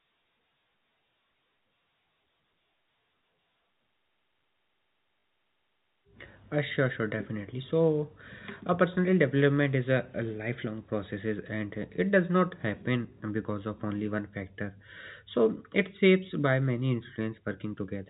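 At 5.2 s the speech breaks into a brief robotic stutter lasting 40 ms, ending at 5.24 s: packet loss with last packet repeated. The receiver replays the last good block in place of missing audio, consistent with two lost 20 ms packets.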